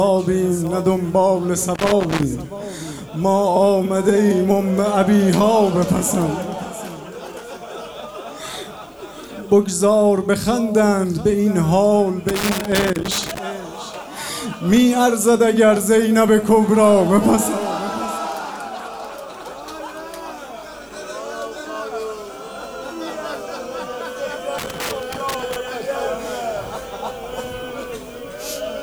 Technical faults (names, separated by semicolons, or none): loose connector crackle